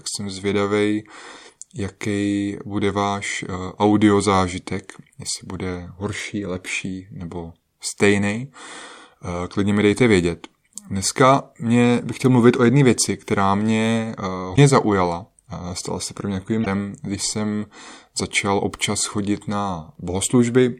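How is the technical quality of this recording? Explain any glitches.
Two short glitches mar the speech, both from damaged data in a compressed stream. At 14.53 to 14.59 s, and again at 16.62 to 16.67 s between "se pro mě" and "když jsem začal", corrupted bytes reach the decoder. It misreads or discards those frames and loses sync until it finds a valid frame header. Each failure lasts about 50 ms and is heard as a brief chirp, squawk, click or short hole breaking into the speech.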